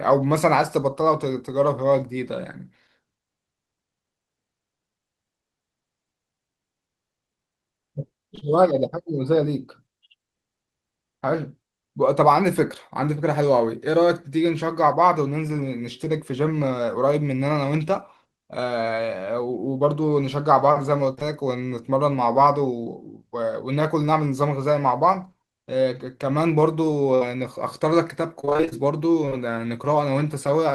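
Short concealed packet loss appears first at 8.35 to 8.43 s, then again at 21.15 to 21.23 s, as two back-to-back dropouts of about 20 ms each, which fits 20 ms packets. The receiver patched each hole by extending the preceding speech sound and then crossfading into the real audio that followed. Each time, the result is a brief smear or wobble of roughly 40 ms. A quick consonant can be softened or lost inside it.

A burst of packet loss follows at 27.15 to 27.23 s, when about 60 ms of the speech never arrived in time to be played. The decoder filled the gap by stretching the last sound it had and letting it fade, so a voiced sound turns into a short held buzz and an unvoiced one into a dying hiss. The speech then picks up again slightly further on, with that fragment missing.

Repeated packet loss with robotic sound takes over from 28.41 to 28.73 s. Eight separate dropouts, none longer than about 25 ms, remove about 160 ms in total, so close to half of this stretch is concealment rather than real speech. 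The patches follow each other too quickly to blend in, giving a choppy, robotic quality with pieces of the speech missing.

Short concealed packet loss returns one last time at 29.25 to 29.33 s, again as a pair of roughly 20 ms holes. It produces the same brief smear as the earlier ones.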